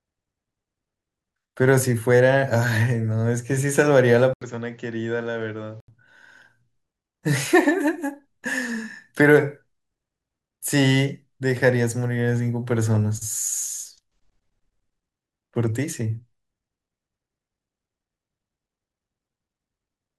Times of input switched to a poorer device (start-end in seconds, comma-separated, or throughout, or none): 4.33-5.88